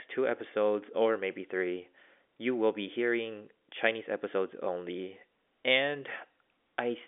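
No technical faults are audible.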